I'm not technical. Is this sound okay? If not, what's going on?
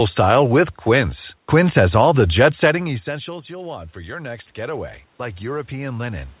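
No. There is an automatic gain rising problem from 2.65 s to the end. Just after "has all the jet", the speech drops sharply because the talker moved away from the microphone. The system's automatic volume control notices the quieter input and slowly turns itself up, so the speech and the room noise behind it swell louder together over the last few seconds instead of the level being restored straight away.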